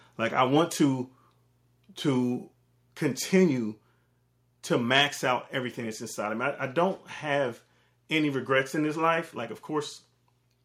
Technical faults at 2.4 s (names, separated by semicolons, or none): none